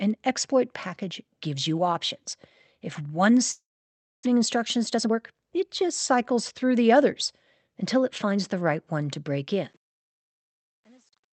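A speech clip carried over a call codec whose sound points to Opus, with a top end near 8 kHz. From 3.51 s to 4.27 s the sound smears into a fading buzz, then goes quiet for about 620 ms. About 400 ms of speech never returns. This is likely a long network dropout, with the receiver stretching the last sound before giving up. From 4.35 s to 8.69 s comes a jitter buffer speed-up. The receiver is draining built-up delay, roughly 300 ms in all. It trims short pitch-period pieces again and again. Speech runs at 107% speed at unchanged pitch and sounds hurried. Starting around 9.5 s, the smooth fade-out shows truncation distortion on a fade. The fade keeps only 9 bits and adds no dither. From 9.97 s the tail turns gritty.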